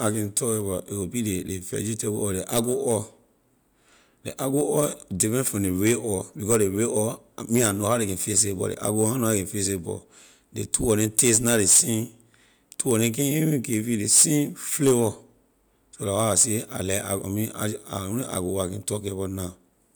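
Speech recording, no technical faults heard.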